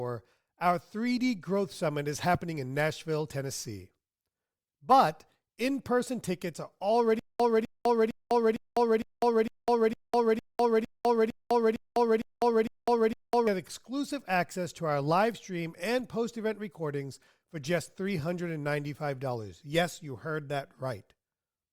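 From 7.19 to 13.47 s, after "in person tickets are", there is a stutter with silent gaps. A 253 ms burst repeats 14 times, separated by 203 ms silences. A stalled stream likely caused it.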